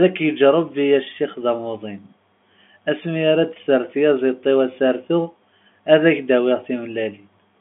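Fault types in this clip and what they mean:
There are no fault types in this clip, so there is nothing to say about what they mean.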